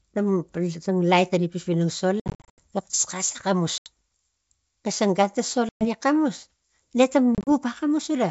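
Speech over a G.722 wideband call, whose faint upper-band hiss fits the 64 kbit/s mode, suffers packet loss on an ADPCM call: lost packets become silence and the decoder's predictor and step size drift from the sender's. Hard-edged holes appear at 2.20 to 2.59 s (280 ms lost, scattered in runs up to 80 ms, roughly thirty packets), 3.78 to 3.89 s, after "xisang gan ta" at 5.69 to 5.87 s before "gi xamus", and after "ne ta" at 7.35 to 7.49 s. Each time, speech resumes with brief, slight distortion.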